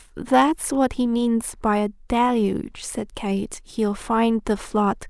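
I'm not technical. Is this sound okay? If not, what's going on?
Yes, it's fine; nothing in this recording stands out as a technical problem, so there's nothing going on you need to worry about.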